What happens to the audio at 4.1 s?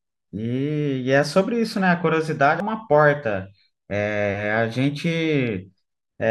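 Nothing goes wrong at 4.1 s; the speech continues intact through that moment, with no dropout, click or distortion.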